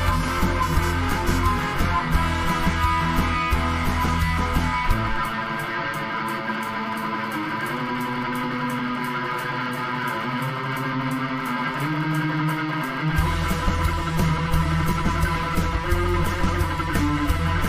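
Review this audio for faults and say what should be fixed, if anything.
At 13.26 s there are compressed frames skipped: about one frame, roughly 20 ms of audio, never plays, because the frame was missing from the file or the decoder rejected it as damaged. The sound jumps forward by that amount, leaving an audible break in continuity at the join. On a waveform the cycle breaks off and resumes out of step. On a spectrogram a thin vertical seam cuts across the harmonics, with patterns misaligned on either side. To prevent it, verify file integrity after transfer and re-encode from an intact source.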